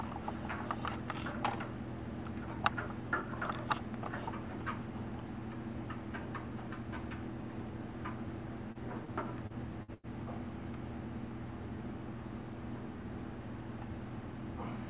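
Brief smears or wobbles at 8.72, 9.05 and 9.47 s, each about 30 ms, are short concealed packet loss: a packet arrived too late or not at all, so the receiver stretched the preceding sound across the gap and then blended back into real audio. From 9.83 to 9.91 s and again from 9.94 to 10.06 s the sound turns into a held, fading tail and then jumps ahead. This is a burst of packet loss, with about 60 ms and then 90 ms of real audio missing and covered by decaying continuation. The audio arrives over a call path whose band stops at 4 kHz, which fits a G.711 A-law codec.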